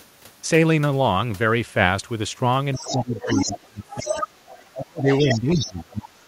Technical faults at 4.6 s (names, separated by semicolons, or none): other side's voice leaking through